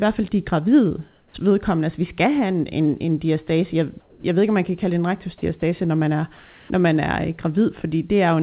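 Speech, carried over a call path that passes nothing above 4 kHz, which points to a narrowband codec such as G.711. Comfort noise in place of the background appears at 1.08 to 1.34 s after "fald de gravide", at 4.0 to 4.24 s before "jeg ved ikke om", and at 6.36 to 6.7 s. Each time the real room tone becomes a steady, featureless hiss, about 5, 10 and 2 dB quieter, likely because transmission paused during silence. Unlike a dropout, the gap is filled rather than silent. At 1.32 s the next sound starts abruptly with its soft beginning missing, an onset clipped by the voice detector, likely because the detector triggered late. Unlike a noise gate, there is no fade-in.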